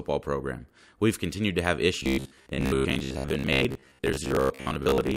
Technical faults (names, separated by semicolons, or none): robotic sound from repeated short buffers